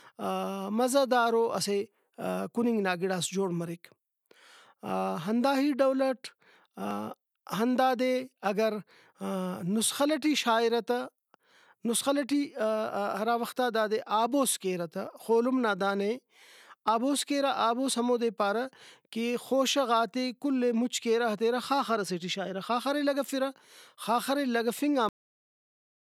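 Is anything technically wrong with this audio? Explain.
Yes. The speech has two technical faults.

Audio missing between chunks occurs at 6.91 s and again at 16.88 s, just before "آبوس کیرہ". The ten-second spacing points to a recorder likely working in 10-second chunks and dropping a sliver at each handover. Roughly 30 ms disappears each time, and the surrounding audio is butted together with no gap. The result is a small skip, a sudden jump in the speech where a fragment of sound is missing.

A cut-off end occurs at 25.09 s, where the speech stops mid-sound and falls straight to digital silence for the rest of the clip. The final stretch of audio was never written out, so there is no natural decay or trailing room tone. The sound simply halts.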